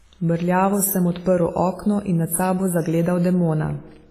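From the start to the end of the speech, the sound is ringing and washy, with a hiss that swells and fades with the signal and nothing above 15.2 kHz. The damage is heavy and most likely comes from WMA compression at a low bitrate, perhaps near 24 kbps: long transform blocks spread quantisation noise across tens of milliseconds, and weak spectral lines are zeroed. On a spectrogram, content stops at a hard ceiling at 15.2 kHz, with patchy, blocky holes where quiet detail was discarded.

From 2.28 to 2.31 s, pre-echo puts a brief hiss about 34 ms ahead of a sharp attack, and the attack itself sounds soft and smeared. The codec spreads its noise evenly over a whole block, so noise sized for the loud onset also fills the quiet stretch just before it. On a waveform, a low fuzzy ramp appears before the transient. On a spectrogram, a broadband smear leads the onset by about 34 ms.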